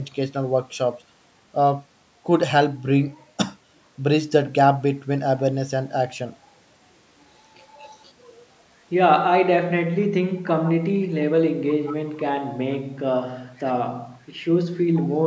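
Echo leak appears five times: 7.91–8.10, 10.64–10.71, 11.85–11.96, 13.57–13.72 and 14.94–15.07 s. Brief, faint scraps of the speech return about 0.48 s late, most likely because a loudspeaker-side echo canceller let residual pickup through. The scraps are very quiet at first, somewhat louder later.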